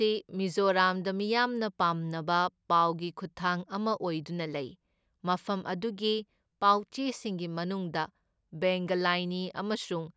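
No technical faults are audible.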